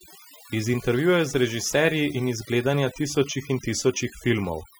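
Throughout the speech, the background drops to near silence scattered with twinkling specks. This is overdone noise removal: the reduction was set too hard, shutting off individual frequency bands that sat near its noise estimate and taking quieter parts of the voice along with them.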